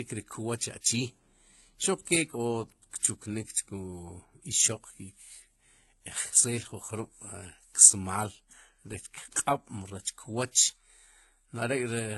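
Throughout the speech, content stops at 11.8 kHz and two sets of codec artefacts overlap, likely from transcoding between lossy codecs: low-rate HE-AAC smearing carried through a later WMA encode.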